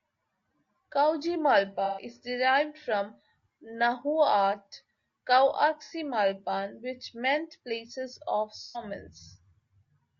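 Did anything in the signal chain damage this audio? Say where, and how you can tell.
Yes. At the codec stage, the whole clip has rough, grainy speech with noise filling the gaps between harmonics and a thin, synthetic-sounding top band. That is likely low-delay AAC compression (AAC-ELD): short frames resolve pitch poorly, and the damage fits a bitrate around 32 kbps.

In the network path, AAC frame loss with concealment leaves smeared, noisy patches at 1.85–2.05 s (just before "is derived from the"), 5.84–5.93 s, and 8.63–8.84 s (just after "which meant place of"). Each gap points to a few lost frames that the decoder papered over from the last good spectrum.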